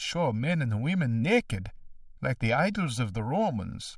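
Throughout, the speech sounds hollow and phasey: channel delay (comb filtering), one channel lagging about a millisecond and a half, carving evenly spaced notches from around 400 Hz.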